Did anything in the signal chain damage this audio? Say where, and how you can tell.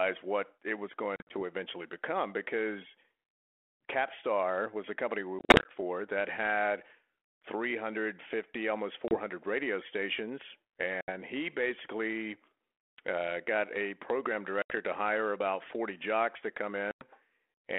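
Yes, at the network stage: packet loss on an ADPCM call. Hard-edged silent holes fall at 1.16–1.43 s, 5.39–5.71 s, 9.08–9.15 s, 11.01–11.10 s, 14.62–14.72 s and 16.91–17.04 s. Speech resumes slightly distorted as the decoder's predictor and step size, knocked out of step with the sender's, recover.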